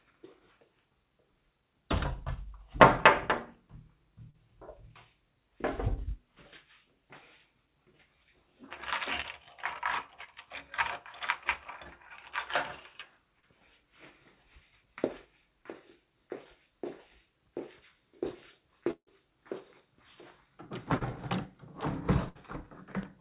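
A recording of everyday sounds, carried over a narrowband call path with nothing above 4 kHz, which points to a G.711-style telephone codec. Brief smears or wobbles at 4.3, 9.22, 10.24 and 13.4 s are short concealed packet loss: 20 to 40 ms of audio arrived too late, and the receiver patched each hole by extending the preceding sound. From 18.91 to 22.37 s the sound turns choppy. This is repeated packet loss (robotic sound). Four separate gaps, the longest about 156 ms, were each filled by continuing the last sound before the real audio resumed.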